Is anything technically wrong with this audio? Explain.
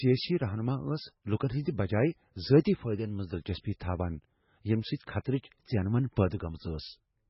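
Yes. Throughout the speech, the treble stops dead at about 5.6 kHz, and the remaining sound is heavily damaged, with a watery, swirling texture. The likely cause is MP3 compression at a very low bitrate, fitting roughly 16 kbps: the encoder discards the high band and drops weak frequency lines that flicker between frames.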